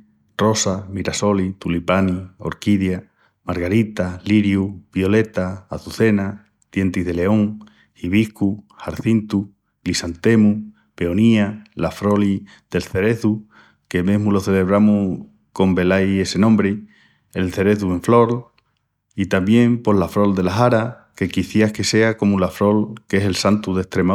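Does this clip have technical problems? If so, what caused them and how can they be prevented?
No, no technical faults here.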